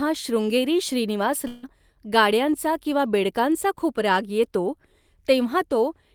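At 1.47 s the speech breaks off and, for roughly 0.18 s until 1.66 s, the last sound is stretched into a buzzy, fading continuation rather than going silent. When the speech resumes, about 160 ms of it is simply gone, so the sentence jumps forward. This points to a long network dropout, likely: packets stopped arriving, the receiver's concealment kept extending the final sound for around 150 ms, and playback then picked up later without the lost part.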